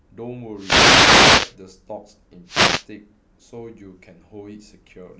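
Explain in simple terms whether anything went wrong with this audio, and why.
Two wireless microphone noise hits interrupt the speech, from 0.55 to 1.56 s and again from 2.45 to 2.86 s. Each is a burst of static that swishes over the voice. The microphone sends its sound to the receiver over an analogue FM radio link. When reflected copies of that radio signal arrive out of step, they cancel and the signal fades. The receiver's own hiss then rises into the sound until the signal recovers.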